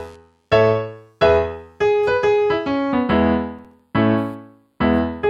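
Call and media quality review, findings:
Computer activity noise, whole clip: faint buzzing chirp, pulsing around 150 Hz and sitting far below the sound, varying with machine activity rather than content. Probable cause: CPU, GPU or mouse load currents modulating the ground shared with the audio circuit.

Channel delay (comb filtering), 2.92 s to end: sound turns hollow and phasey, top end dulled, with a fixed notch near 7 kHz. Probable cause: one channel lagging the other by a few samples before the mono sum, so shared content cancels at evenly spaced frequencies.

Processor overload crackle, 3.59 to 3.80 s: short burst of gritty crackle riding on the sound, then clearing. Probable cause: audio thread missing several consecutive deadlines, each miss dropping in a hard-edged gap of silence, which fits buffers of around 5 ms.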